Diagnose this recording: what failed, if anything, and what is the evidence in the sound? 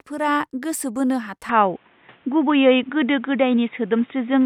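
Input switched to a poorer device at 1.49 s, after "गोसो बोनो": with no gap, speech loses everything above 3.8 kHz, shifts level about 5 dB and gains new background noise about 35 dB below the speech, likely from a driver-level capture-device change.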